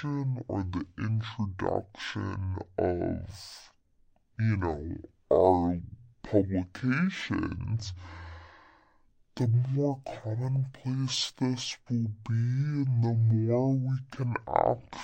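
From start to end, the speech plays at half speed and an octave low, the signature of stereo read as mono: left and right samples were taken in turn as one channel. A spectrogram shows the harmonics compressed downward, with a fainter mirrored copy filling the upper half.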